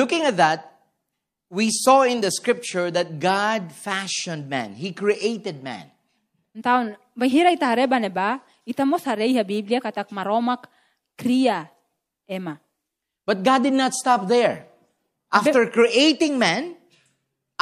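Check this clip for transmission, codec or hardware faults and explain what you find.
One codec fault turns up: pre-echo at 11.17 s, just after "katak maromak". A short hiss, about 11 dB above the quiet, leads a sharp speech attack by some 13 ms, softening its edge. The quantisation noise for that loud onset spread backwards through a transform block that fits a 36 ms window, with no switch to short blocks.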